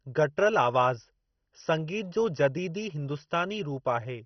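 From start to finish the speech has a heavy, dull, underwater quality with a gurgling, grainy edge, and nothing comes through above about 6.1 kHz. That's likely MP2 compression at a very low rate, which fits something around 32 kbps. Starved of bits, the encoder drops the upper sub-bands entirely and quantises the remaining ones coarsely. Those bands flicker in and out, giving the watery, old-digital-radio texture.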